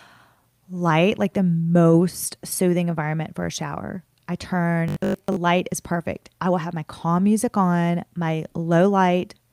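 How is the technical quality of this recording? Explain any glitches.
The recording has audible technical faults: a steady timing problem runs through the whole speech clip, and one short stretch turns metallic.

Clock drift between sender and receiver affects the entire clip. The sending device's clock runs slower than the receiver's, by roughly 1.5 percent. The receiver's buffer therefore keeps draining, and it has to keep making up for the missing audio. This is different from network jitter. Jitter produces random gaps of varying length, whereas drift always pushes in the same direction. The result is a slow, persistent stretching rather than scattered dropouts.

Repeated timing corrections are the audible result of that drift, from 0.36 s to 9.39 s. The receiver repeatedly duplicates small pieces of audio to fill the shortfall. The effective playback speed is 98 percent, and about 150 ms of extra material accumulates over that span. 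Each insertion is tiny and unevenly spaced, so the effect is a faintly unsteady, dragging tempo with occasional slight hiccups, not clear stutters. A time-stretch would sound smooth and uniform, but these corrections are irregular.

Robotic sound from repeated short buffers appears from 4.88 s to 5.38 s. The speech becomes a rigid, metallic buzz pitched at 50 Hz that still roughly follows the syllables. The likely cause is that fresh audio stopped arriving and the software looped its last chunk of about 20 ms, which matches the 50 Hz pitch. Most of that half-second is repeated material. Unlike a plain dropout, the sound never goes silent; instead it becomes a fixed-pitch drone.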